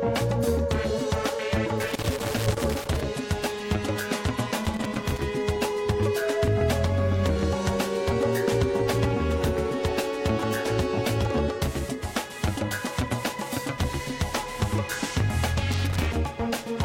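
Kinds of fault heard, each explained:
Loose connector crackle: A worn or dirty contact keeps making and breaking as it shifts. Each break chops the signal into irregular, scratchy crackle. Here it comes in three bursts: 1.82 to 3.01 s, 4.65 to 5.22 s, and 15.72 to 16.13 s.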